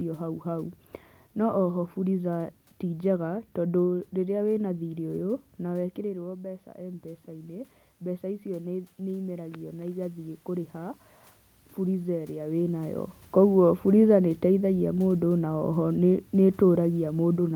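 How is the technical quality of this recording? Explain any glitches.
The recording has two automatic gain control faults, each a slow level drift as the gain control adjusts to the level arriving at the microphone.

From 6.01 s to 11.03 s there is automatic gain rising. Shortly before, around five and a half seconds in, the talker moves away and the input drops by about 11 dB. The gain control responds by raising its gain by about 7 dB over roughly five seconds. The voice climbs back gradually, and the room noise swells with it, so the background audibly lifts along with the speech.

From 13.36 s to 17.4 s there is automatic gain falling. Around twelve and a half seconds in, the talker moves. The gain control then pulls its gain down by about 4 dB over roughly four seconds. The speech starts out loud and sinks steadily toward the end of the clip, and the room noise sinks with it.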